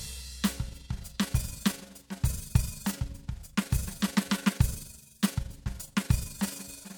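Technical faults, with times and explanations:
0.68 to 6.97 s, overlap-add ripple: the level pulses about 6 dB, roughly 20 times a second. Reassembled frames overlap unevenly, giving a rough, fluttering tremolo.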